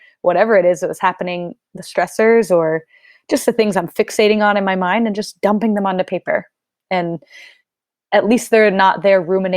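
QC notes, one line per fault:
2.17 s, corrupt frame decoded: a brief squeaky blip between "that was happening the" and "or just the things", peaking around -30 dBFS. One damaged compressed frame was played as-is, its misread codes briefly putting energy at the wrong frequencies.
6.21 s, corrupt frame decoded: a much fainter blip, around -50 dBFS, just after "just dumping them onto". A couple of corrupted frames were decoded anyway, leaving a short stray chirp instead of the intended spectrum.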